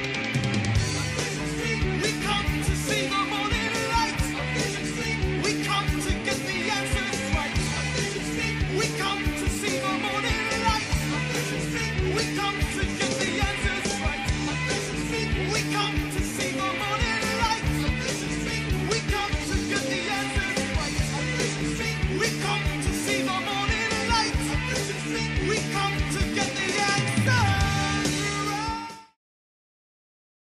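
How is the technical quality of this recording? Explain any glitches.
No technical faults are audible.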